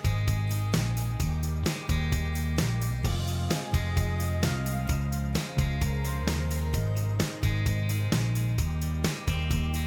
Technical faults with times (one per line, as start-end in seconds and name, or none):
none